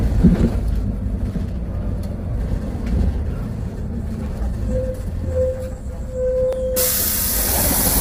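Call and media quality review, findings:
Low-delay AAC compression, throughout: rough, grainy texture with noise filling gaps between tonal components and a dull, synthetic-sounding top band. Likely an AAC-ELD encode, whose short frames resolve harmonics poorly; damage this heavy fits a low bitrate of about 24 kbps.

Dropped samples at 1.30, 4.26 and 6.53 s: single sharp clicks, each a thin vertical line across the spectrum. Likely a capture or buffering gap losing under a millisecond of samples, so the waveform jumps straight to a later value.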